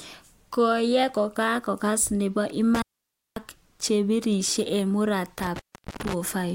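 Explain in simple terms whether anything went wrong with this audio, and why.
Yes, there is an intermittent contact fault, twice. A loose cable or plug briefly lost connection. After "kakashin nepo", around 2.75 to 3.36 s, the sound crackles, drops out for about half a second, then returns at "ak chepirishen". It happens again from 5.39 to 6.14 s.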